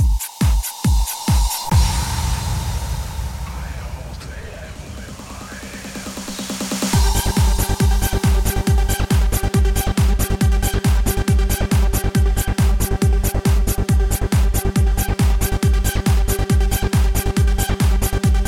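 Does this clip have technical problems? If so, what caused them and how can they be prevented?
No, this clip has no technical problems, so there is nothing to prevent.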